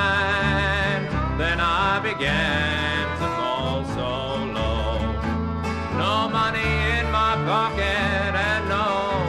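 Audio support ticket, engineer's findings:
No faults found on listening.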